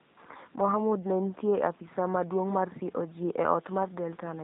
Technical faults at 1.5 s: G.729 codec

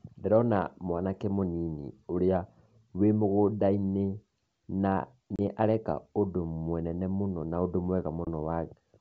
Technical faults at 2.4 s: none

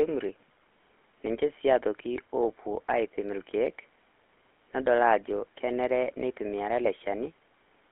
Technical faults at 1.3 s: GSM full-rate codec

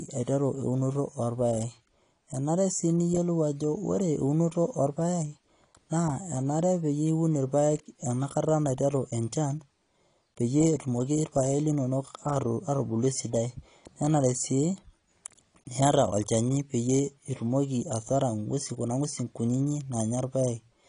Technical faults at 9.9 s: AAC compression

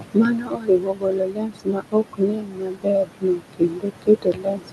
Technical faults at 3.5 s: noise suppressor artifacts; speech cut by the noise suppressor

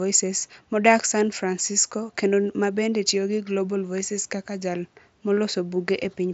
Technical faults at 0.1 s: none

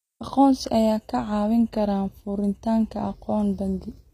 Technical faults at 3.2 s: HE-AAC compression

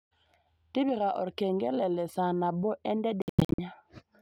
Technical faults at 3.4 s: Bluetooth dropout

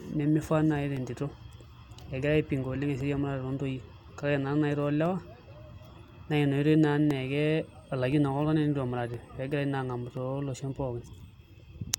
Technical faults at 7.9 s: periodic USB or driver dropouts

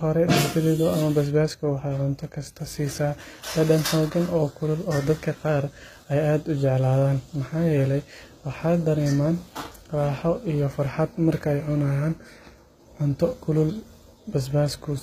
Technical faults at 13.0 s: HE-AAC compression

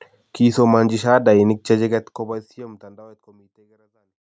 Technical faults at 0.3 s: none

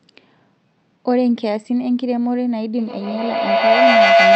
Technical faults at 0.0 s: none

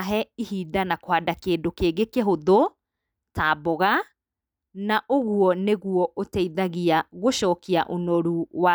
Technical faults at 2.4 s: none

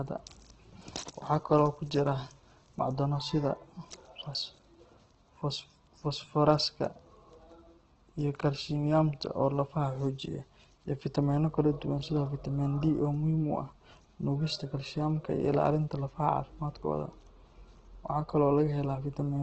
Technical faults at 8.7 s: Opus compression

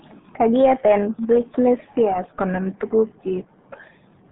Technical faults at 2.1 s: RealAudio 14.4 codec

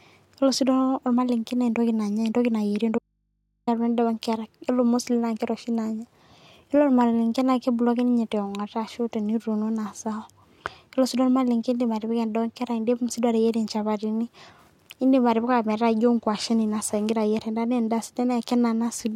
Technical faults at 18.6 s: none

